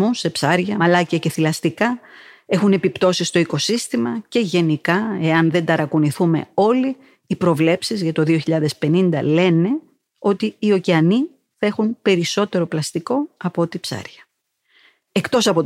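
No technical faults can be heard anywhere in the speech.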